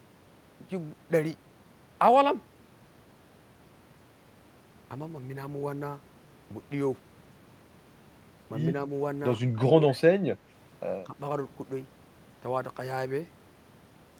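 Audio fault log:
9.77–10.11 s: speech suppressed in double talk. The speech sinks by about 20 dB, likely an echo canceller muting the talker while the far end spoke.
11.04–11.14 s: speech suppressed in double talk. A brief, shallow dip of a few dB, likely the canceller again mistaking the talker for loudspeaker echo.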